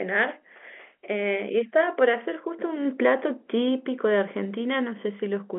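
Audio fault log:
No faults are heard in this speech clip. It carries the narrow band of G.711 A-law telephone coding, roughly 250 Hz to 3.4 kHz with nothing above 3.7 kHz, and any trace the coding leaves is faint at most.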